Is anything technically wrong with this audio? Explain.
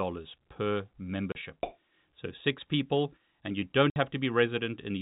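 Yes. Packet loss filled with silence: the receiver played silence for missing packets, leaving a 30 ms hole at 1.32 s and a 60 ms hole at 3.90 s, just after "people and you don't", consistent with one and then two 30 ms packets, with hard edges through the narrowband G.711 telephone sound.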